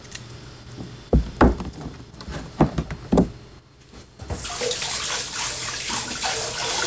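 No technical faults can be heard anywhere in this recording of everyday sounds. Nothing in it points to a problem in how the audio was captured, carried or reproduced.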